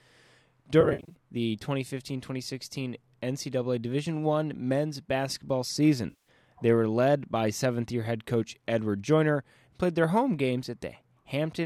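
AAC frame loss with concealment occurs twice. From 0.81 to 1.14 s, about 210 ms of audio went missing in scattered gaps over some 300 ms, the longest run around 70 ms. The decoder rebuilt each gap from the last good spectrum, so the passage turns smeared and phasey, with brief noisy flickers. At 6.10 to 6.28 s, about 160 ms was lost just before "they were led by", leaving a concealed smear. The surrounding audio carries a light graininess, likely from low-delay AAC compression.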